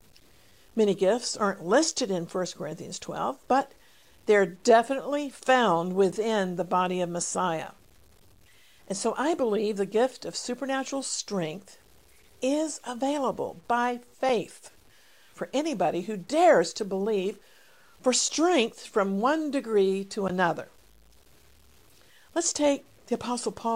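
Gritty, grainy distortion follows the speech throughout, roughening quiet passages: likely low bit depth without dither, consistent with truncation to about 9 bits, error roughly 35 dB down.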